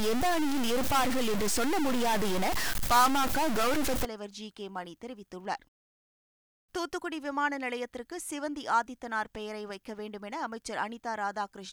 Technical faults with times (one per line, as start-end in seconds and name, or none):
0.00-4.05 stuck bit